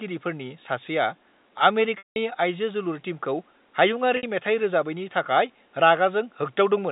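Speech over a telephone-band line shows packet loss with pitch repetition twice: at 1.98 to 2.16 s (180 ms) the last pitch period loops, fading to silence, and at 4.17 to 4.23 s (60 ms) it becomes a brief held buzz. A spectrogram shows frozen, flat harmonic stripes in both gaps.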